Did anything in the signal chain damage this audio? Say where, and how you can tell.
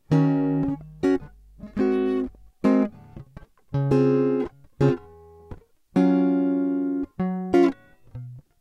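Yes. From 0.35 to 2.53 s the music carries mains hum, a steady 50 Hz tone roughly 30 dB below the music. This points to the analogue wiring, where a ground loop or nearby transformer couples the power line into the signal. A spectrogram shows a flat horizontal line at 50 Hz over that span.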